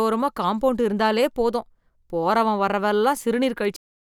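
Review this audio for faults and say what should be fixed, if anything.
One fault needs fixing: a cut-off end. At 3.76 s the speech stops partway through a sound and drops straight to digital silence, which holds for the final 0.32 s. There is no decay or tail, so the waveform ends abruptly mid-utterance. This happens when the last buffers of audio are never written to the file or passed to the output, so whatever was still in flight at stop time is lost. To prevent it, flush and drain all pending buffers before closing the stream or file.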